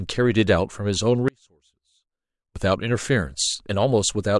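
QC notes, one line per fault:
1.28–2.56 s audio dropout to a faint residue: speech cuts abruptly to a faint leak about 35 dB down, likely signal lost while the path stayed live.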